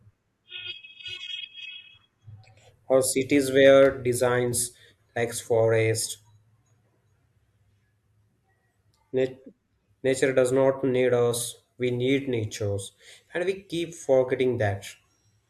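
A speech recording, and nothing is technically wrong with it.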